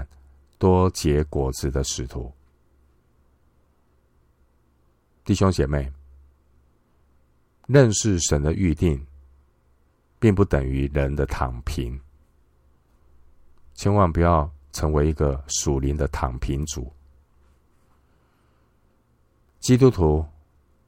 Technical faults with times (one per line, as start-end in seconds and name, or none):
19.76 underrun with held sample